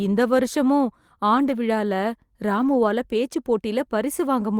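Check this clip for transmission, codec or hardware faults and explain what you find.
Two instances of lost packet rebuilt from error correction occur: 1.33 to 1.51 s, just after "இந்த வருஷமும்", and 2.57 to 2.75 s. Each is consistent with about five lost packets, with roughly 100 ms rebuilt from the low-bitrate redundant copies carried in the following packets. There is no gap, but those stretches sound rougher and noisier than the surrounding speech.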